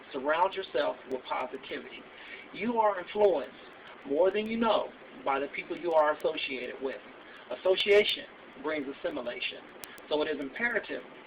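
From 0.24 s to 11.15 s, sharp little ticks repeat at a steady rate of roughly one every 0.15 s, around seventy in all. These are word clock ticks. The receiving device is running on its own clock rather than locking to the digital link's sender, and the two clocks disagree by something on the order of 150 ppm. Each time they drift a full sample apart, one sample is dropped or repeated, leaving a tiny discontinuity.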